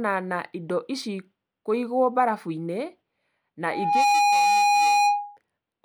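Loudspeaker feedback squeal runs from 3.63 to 5.37 s. The microphone hears its own loudspeaker. An 821 Hz tone swells quickly, about 10 dB over the speech.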